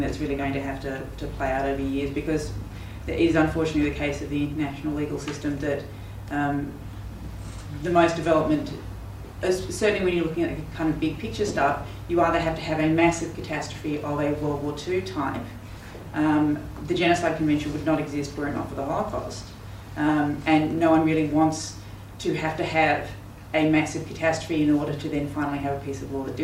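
No technical faults can be heard anywhere in the recording, and the signal holds steady throughout without any dropouts, glitches or interruptions.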